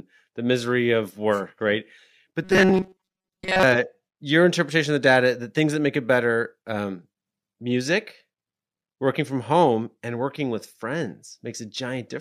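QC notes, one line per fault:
2.44–3.63 s, robotic sound from repeated short buffers: the speech turns into a rigid, metallic buzz near 188 Hz until just before "uh your interpretation of". It is likely caused by a buffer of about 5.3 ms replaying over most of this stretch. Unlike a stutter, the buzz stays at a fixed rate.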